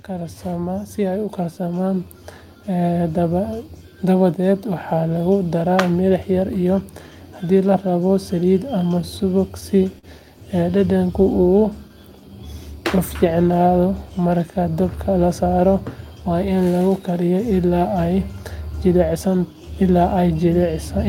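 A speech clip with three technical faults. From 0.07 to 6.64 s, automatic gain rising is heard. The level climbs by about 10 dB. Voice and background swell together. The gain control judged the input too quiet and pushed its gain up slowly. Between 9.01 and 10.05 s there are repeated stalls, a stutter. Six brief holds occur, the longest 45 ms, about 96 ms in all. Late packets kept draining the jitter buffer, so the last sound was stretched each time. Nothing is lost, but the speech drags. From 13.91 to 14.27 s a jitter buffer speed-up follows. Speech runs at 108% speed with unchanged pitch and sounds hurried. The buffer held excess audio, so tiny pitch-period slices were cut, roughly 40 ms in total.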